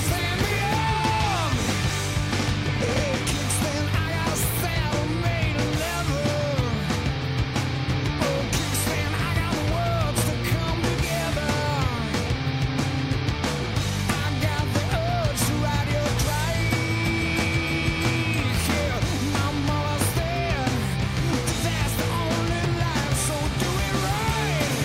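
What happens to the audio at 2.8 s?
Nothing goes wrong at 2.8 s; the audio plays through that moment intact, with no dropout, click or other fault.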